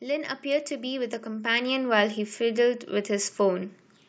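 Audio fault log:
0.05–3.75 s: automatic gain rising. The gain control judged the input too quiet and lifted it by about 11 dB, so voice and background swell together.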